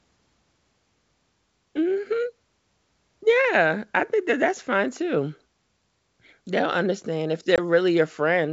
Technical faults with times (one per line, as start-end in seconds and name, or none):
7.56-7.59 packet loss on an ADPCM call